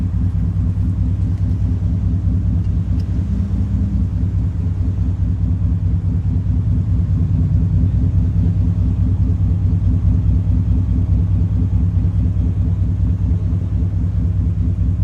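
At 13.61 s, compressed frames are skipped: around a tenth of a second of audio, about seven 20 ms frames, is lost, leaving a visible spectrogram discontinuity.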